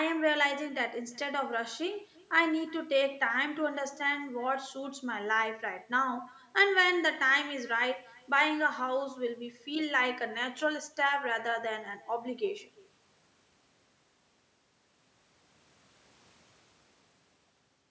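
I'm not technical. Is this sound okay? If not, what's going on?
No. Throughout the clip there is echo with no canceller: a faint copy of the speech comes back about a third of a second after each phrase. On the other end of the call, the loudspeaker played this speech into the room, that person's microphone picked it up again, and nothing on the line stripped it out. The returning copy is much quieter and sounds thinner, so every sentence trails a ghostly repeat behind it.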